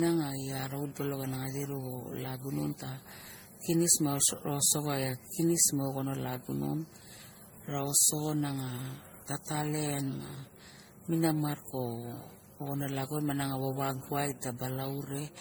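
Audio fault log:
throughout, generation loss: likely MP3 re-encoded about five times, consistent with 64 kbit/s, so stacked quantisation noise leaves the speech swirly, hollow and smeared, with blurred attacks.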